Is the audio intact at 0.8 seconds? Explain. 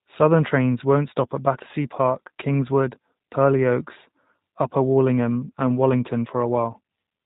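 No. At 0.8 seconds, as throughout the clip, the speech has passed through the G.729 codec, whose heavily reduced data rate is consistent with an 8 kbit/s voice stream. The codec discards the waveform and rebuilds each 10 ms frame from a vocal tract filter, a pitch predictor and a handful of pulses, with nothing kept above 4 kHz. The result is plainly audible: the speech is band-limited, slightly rough and synthetic-sounding.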